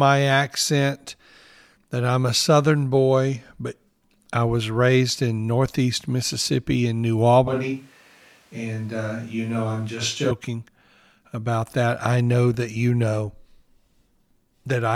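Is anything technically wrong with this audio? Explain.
Yes, from 7.48 to 10.31 s there is a switch to a distant microphone: the close mic's feed most likely dropped out, leaving a farther pickup. The speech turns suddenly roomy, hollow and thinner in the bass, around 5 dB quieter, with room noise roughly 30 dB below it, then snaps back.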